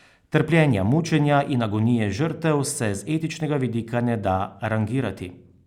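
No technical faults turn up anywhere in the speech. Nothing in it calls for a time mark or a second listen.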